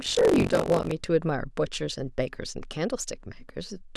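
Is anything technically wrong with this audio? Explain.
Yes. From 0 to 0.93 s there's buffer tearing: writer and reader cross each period, splicing in roughly a fifth of 40-ms-old audio, giving a rattly 46.9 Hz buzz, which fits a 512-sample buffer.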